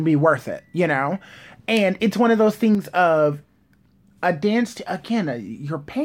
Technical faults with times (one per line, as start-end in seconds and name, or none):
2.75-2.85 one channel drops out